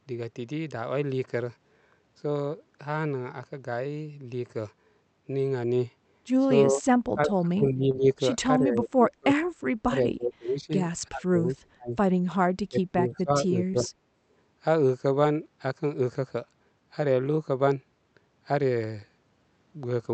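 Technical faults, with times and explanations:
6.71–6.85 s, 7.14–8.06 s, 8.59–9.38 s, 9.86–10.72 s, 11.09–11.96 s and 12.69–13.88 s: speech suppressed in double talk. The level repeatedly dips by about 20 to 40 dB, deepest near 11.1–12.0 s, for up to roughly 0.7 s at a time. This is likely an echo canceller mistaking the near talker for loudspeaker echo while the far side speaks.
7.91–7.96 s and 13.72–13.75 s: short concealed packet loss. About 20 ms of audio failed to arrive each time, and the decoder bridged the gap by extending the preceding sound before blending back. This leaves a brief smear or wobble inside the double-talk passages.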